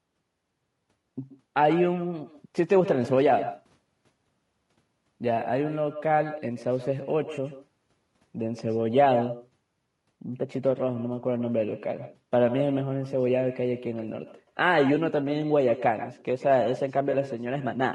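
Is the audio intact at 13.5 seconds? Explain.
No. At 13.5 seconds the speech carries a trailing shadow: each syllable returns about 150 ms later as a thinner copy, about 13 dB below the direct sound. This is echo with no canceller. The far end plays the call through a loudspeaker, its microphone picks that playback up, and nothing subtracts it before it travels back. The echo runs through the whole recording, not just this moment.

The voice at that point also sounds rough and grainy, with a hiss-like fill between the harmonics and a top band that sounds dulled and somewhat artificial. The likely cause is low-delay AAC compression (AAC-ELD). It codes about 500 frequency lines a frame with a low-delay window, and the damage is plainly audible here, which fits a rate around 32 kbps. This roughness is also present throughout.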